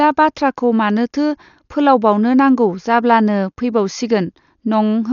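Dolby Digital compression damage runs throughout the speech, heavy, with nothing above 6.9 kHz. Likely a starved encoder, fitting roughly 48 kbps, narrowed the band and left many frequency lines without mantissa bits, filled by dither noise, so it sounds dull, roughly fluttering.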